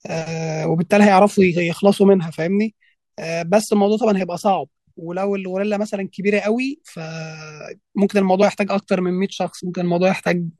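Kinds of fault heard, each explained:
Compressed frames skipped: at 8.41 s and 9.59 s the speech jumps ahead by roughly one, then two, whole frames, consistent with 24 ms frames.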